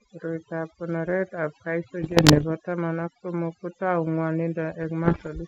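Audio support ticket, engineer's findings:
Overdone noise removal, whole clip: denoiser set too strong, cutting bands near its noise estimate along with quiet speech. Background drops, breaking into twinkling specks.

Bit errors on the G.722 ADPCM link, 2.03–2.46 s before "taman ak somok", and 5.04–5.29 s: corrupted bits upset step size and predictor. Pops, rough bursts, brief level jumps.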